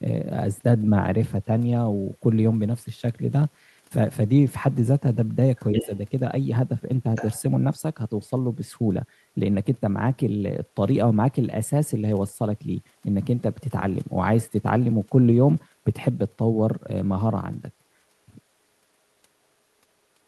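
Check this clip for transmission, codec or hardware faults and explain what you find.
Two echo-related faults show up in this speech clip.

Other side's voice leaking through, 5.57–5.97 s and 7.15–7.41 s: a second voice is heard, likely because the echo canceller left loudspeaker pickup in the microphone signal. It is about 5 dB below the talker at first, then far fainter.

Speech suppressed in double talk, 5.82–5.90 s: while that leak overlaps the talker, the talker's level dips by about 5 dB for roughly 70 ms, likely from the echo canceller turning down both voices together.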